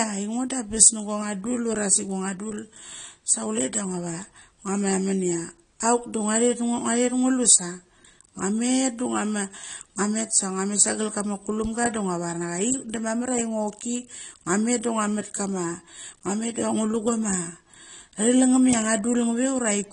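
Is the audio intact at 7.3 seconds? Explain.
No. At 7.3 seconds the speech carries the same damage heard throughout, most likely AAC compression. Nothing reaches above 9.9 kHz, and codec damage is plainly audible, which fits a low AAC-LC bitrate around 32 kbps. The encoder quantises each frame's frequency lines against a hearing model, so the sound is dull and smeared. A simple low-pass filter would remove the top just as cleanly but leave the remaining band undamaged.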